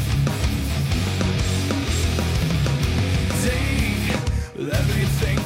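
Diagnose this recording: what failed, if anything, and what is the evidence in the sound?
Nothing failed; no stage shows any fault here.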